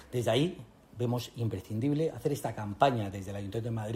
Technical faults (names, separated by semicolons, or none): none